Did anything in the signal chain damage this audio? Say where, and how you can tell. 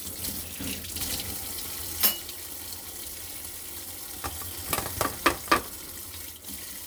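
No, no stage of the signal chain has left any audible damage on this recording. Listening through, nothing in the sound points to a problem with the wiring, conversion, processing, transmission, storage or playback.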